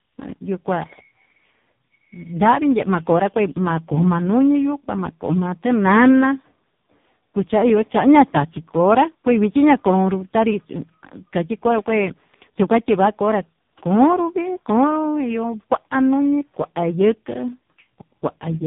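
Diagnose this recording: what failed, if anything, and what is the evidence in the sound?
Tandem speech coding failed at the codec stage, across the whole clip. The speech is rough, muffled and warbly, with nothing above 3.8 kHz. That points to three speech codecs in a row, ending in a very low-rate AMR-NB. Each coder re-encoded the previous one's damage.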